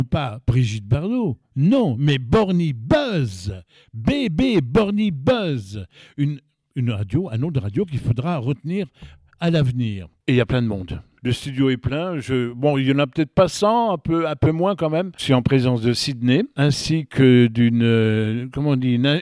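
No technical faults can be heard anywhere in the clip.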